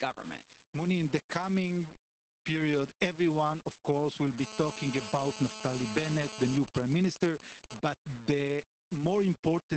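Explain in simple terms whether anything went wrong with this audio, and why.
Several things went wrong. Throughout, the speech has a grainy, gritty edge that rises and falls with the voice, likely from low bit depth without dither. Unlike steady hiss, this roughness follows the speech itself.

The whole clip also carries Opus voice compression damage. The speech sounds muffled, slightly hoarse and robotic, with nothing above about 8.5 kHz. That dull, hoarse quality differs from the bit-depth grit.

From 4.38 to 6.58 s, right after "everyone of course will", a hard, raspy GSM phone buzz sits under everything. This is a nearby mobile phone in a call, and it stays steady regardless of the speech.

From 6.68 to 7.89 s it turns into GSM signalling bursts. These are even ticks with a longer buzz twice a second, which happens when that phone's user goes silent.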